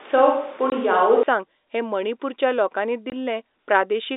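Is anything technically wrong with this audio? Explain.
Yes, there are two kinds of fault in this telephone-band speech.

From the very start until 1.23 s, just before "हें मणिपूरच्या लोकांनी", the audio has the sound of a switch to a distant microphone. The voice is roomy and hollow, with thin bass and a bed of room noise roughly 25 dB under the speech, though its level stays about the same. The likely cause is a far-off microphone standing in for the close one. On a spectrogram, the low end of the 250 Hz to 3.7 kHz line band looks weaker and the gaps between syllables are filled with a noise floor and reverberant smearing, which clears abruptly at 1.23 s.

There is packet loss filled with silence at 0.70 to 0.72 s and again at 3.10 to 3.12 s, the second right after "हें मणिपूरच्या लोकांनी". Each hole lasts 20 ms, which fits a single lost packet that the receiver replaced with digital silence. 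You hear a short dropout with hard edges. The waveform shows the signal cutting straight to a flat line and back, and the spectrogram shows a narrow blank vertical strip.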